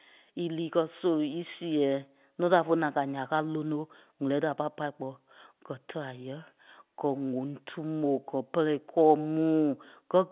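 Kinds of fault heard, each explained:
No faults can be heard.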